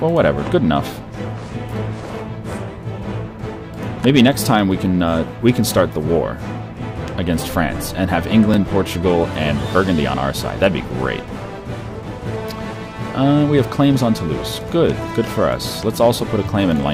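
Overlapping chunks: each 6-second chunk starts 12 ms before the previous one ends, so a sliver repeats, giving brief clicks or stutters at 2.53, 8.54 and 14.55 s.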